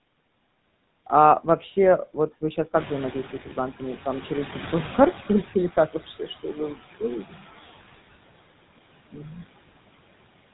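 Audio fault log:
throughout, noise suppressor artifacts: steady background is pulled down about 21 dB frame by frame, so residual noise dips between phrases and swells under the voice.
throughout, GSM full-rate codec: the buzzy, gravelly roughness of pulse-excited vocal-tract coding is plainly audible, with nothing above 3.9 kHz, consistent with a 13 kbps full-rate stream.
2.74–5.81 s, noise suppressor catching up: after the room noise jumps about 13 dB near 2.5 s, reduction lags at about 14 dB, then the noise sinks over roughly 3.1 s as the estimate adapts.
6.19–6.75 s, speech cut by the noise suppressor: brief stretches totalling about a tenth of a second drop as much as about 11 dB, swallowing quiet speech along with the background.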